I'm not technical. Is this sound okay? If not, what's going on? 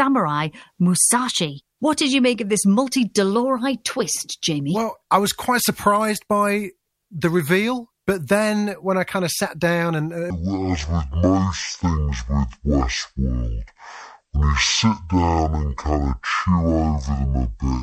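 No. From 10.3 s, right after "of sat down and", this speech has a section at the wrong speed: it plays at about half speed, so the voice drops to a much deeper, dragging tone (roughly ten semitones lower) through "it all starts to" and to the end. The likely cause is playback on the wrong clock.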